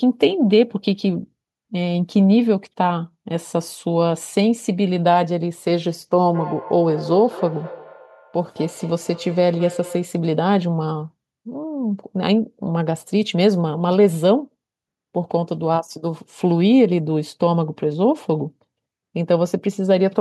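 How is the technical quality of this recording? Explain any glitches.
One clear glitch: feedback echo between two devices, from 6.18 to 10.23 s. A second device in the room replays this microphone's audio, which the microphone captures again. The words return roughly every fifth of a second, thinner and ringing, peaking about 15 dB below the speech. Unlike room reverberation, the repeats are distinct and evenly spaced rather than a smooth tail.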